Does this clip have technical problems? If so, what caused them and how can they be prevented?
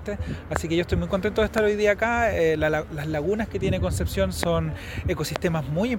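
Yes. A sudden voltage step, likely from a plug, switch, static discharge or driver glitch, entered the signal path and was shaped by the following circuits. This produces a loud pop at 0.56, 1.58, 4.43 and 5.36 s, each about 20 ms long and roughly 20 dB above the sound (about 15 dB at 1.58 s), with the audio continuing underneath. To prevent it, secure connections, avoid switching during recording, ground equipment and keep drivers stable.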